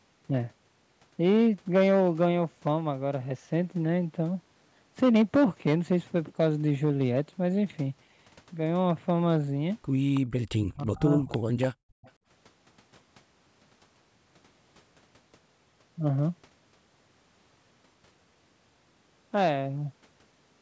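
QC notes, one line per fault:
1.24–2.73 s, 5.03–7.20 s, 8.90–9.37 s and 19.37–19.52 s: hard clipping. The peaks are driven about 7, 6, 2 and 4 dB past full scale and flattened, so loud syllables crackle, turning to a harsh, buzzy fuzz in the heavier stretches. Unlike codec distortion, the grit follows loudness and sits on the peaks, strongest in the first two stretches and mildest at 8.90 s.
10.14–10.21 s, 11.29–11.38 s, 11.61–11.67 s and 12.02–12.12 s: echo leak. These are short scraps of a delayed copy arriving 324 ms behind the original, about 20, 15, 15 and 30 dB below the speech. The likely cause is a far-end echo canceller that let loudspeaker pickup through. A fixed lag and discrete copies set this apart from room reverberation, which would smear continuously.
10.57–11.30 s: speech suppressed in double talk. The talker's own voice sinks by roughly 35 dB in pieces over about 0.7 s while both sides overlap. 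This is likely the canceller turning everything down when it could not separate talker from echo. What sets it apart from background gating is that the speech itself ducks, not just the room.
11.74–12.02 s: background gated by the echo canceller. For about 0.3 s the room tone collapses by about 37 dB, then returns when the canceller releases. Silence replaces the ambience instead of speech dipping. The band-limit at 8 kHz from the call microphone path is present throughout.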